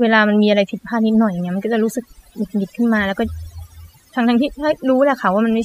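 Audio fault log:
Throughout, overdone noise removal: noise reduction set too hard mutes bands near its noise estimate, leaving a lowered background that breaks up into twinkling specks.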